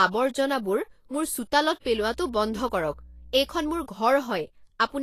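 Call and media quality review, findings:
Grainy, hissy speech throughout, no content above 14.2 kHz. Likely Vorbis compression at a low bitrate, near 35 kbps. Coarse treble quantisation turns detail into noise.

Mains hum from 1.86 to 3.84 s. Steady 60 Hz tone, roughly 20 dB below the speech. Ground loop or nearby transformer coupling the power line into the signal.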